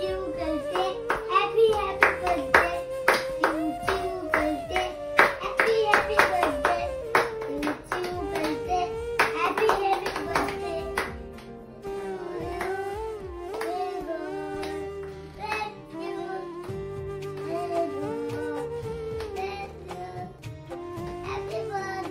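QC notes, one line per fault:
12.42 s, lost LE Audio frame: a brief blip of about 10 ms, which fits a single lost 10 ms LC3 frame on the Bluetooth LE Audio link. The decoder conceals the gap by reusing the last good spectrum with randomised signs, so the hole is filled with a grainy, noise-like copy of the preceding sound rather than silence. The signal resumes on the next frame before concealment needs to fade, so the blemish is a short rough smear.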